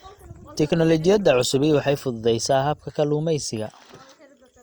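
From 0.0 to 2.0 s, an adaptive stream starting at a low bitrate leaves the speech dull and artefact-laden, then quality jumps abruptly without any gap, unlike a dropout.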